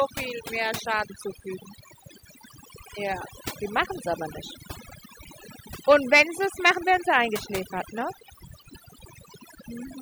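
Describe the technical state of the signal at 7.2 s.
At 7.2 s the speech is affected by overdone noise removal, present across the whole clip. An over-aggressive noise reducer is cutting individual frequency bands near its noise estimate, taking quiet speech detail with them, so the background drops and breaks up into twinkling specks.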